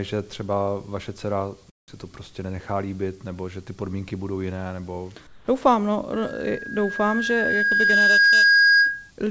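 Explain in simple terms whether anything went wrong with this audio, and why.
Two things go wrong here, and they sound quite different.

First, there's comfort noise in place of the background, twice: from 1.70 to 1.88 s, right after "že třeba vaše dcera" and before "to prostě nenechá líbit", and again from 5.27 to 5.48 s, just after "podmínky budou jiné nebo". In those short gaps the real room sound drops out and a flat, featureless hiss takes over, noticeably quieter. The likely cause is the call's silence detection deciding nobody was talking, pausing the audio and letting the receiving end fill the hole with made-up noise.

The bigger problem is a loudspeaker feedback squeal starting at 6.12 s and running to 9.11 s. It's a single whistle at 1.6 kHz that swells up over roughly two seconds until it's clearly louder than the speech. That's a microphone hearing the speaker it feeds, so that one pitch keeps getting amplified around the loop and grows on its own.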